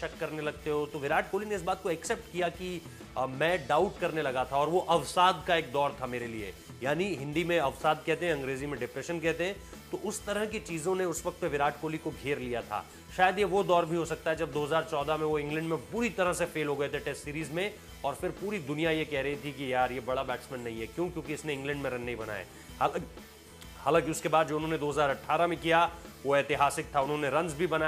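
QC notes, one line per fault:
No faults found. There is nothing to log for this clip.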